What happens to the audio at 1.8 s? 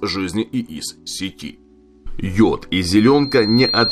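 Nothing goes wrong at 1.8 s; the audio plays through that moment intact, with no dropout, click or other fault.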